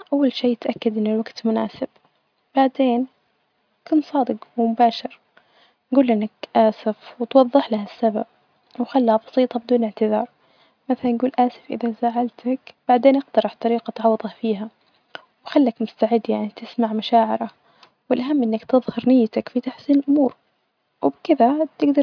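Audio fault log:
No faults are heard in this speech clip. Nothing in it calls for a time or a repair.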